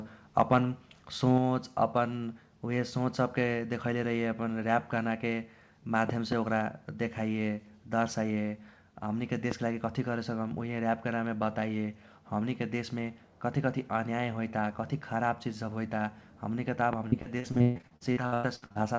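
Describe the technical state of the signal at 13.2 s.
At 13.2 s the speech is intact, carried cleanly through the call path's G.722 coding with nothing above 8 kHz.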